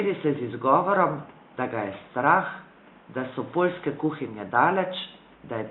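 There are no technical faults to describe in this speech recording at any point in time.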